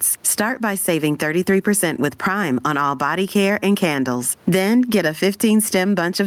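The clip is speech, and gain pumping runs through the whole of it. The room noise sits about 45 dB below the speech. The gain swing is around 10 dB. Loud and quiet passages sit closer in level than they should, so the speech sounds squashed. The likely cause is input gain set far too high, with a fast limiter pulling it down on every loud sound.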